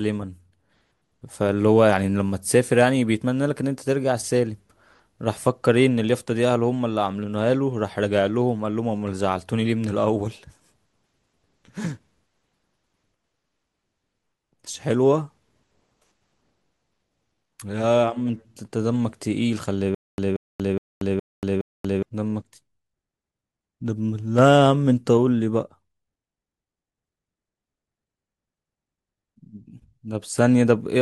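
At 19.95–22.03 s, stutter with silent gaps: a 180 ms fragment repeats five times between 235 ms digital silences, likely a stalled stream, unlike gapless looping.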